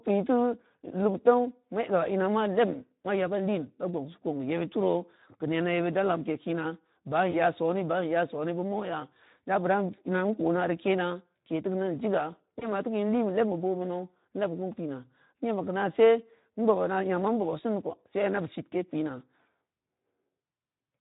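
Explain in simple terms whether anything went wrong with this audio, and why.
Yes, two things went wrong. Throughout the recording, the speech carries the sound of the Speex codec, an older compression method from internet calls and game chat. It keeps too little detail of the voice's underlying buzz, so speech sounds noticeably rough, noisy and hoarse.

There are also two brief dropouts, at 7.31 to 7.36 s and 12.59 to 12.68 s. Each is VoIP packet loss concealed by the speech codec. A piece of audio about 20 ms long, which fits a single lost packet, never arrived. The decoder filled the gap by stretching the previous sound into a fading buzz or hiss, and the voice stays weak or distorted for a moment afterward.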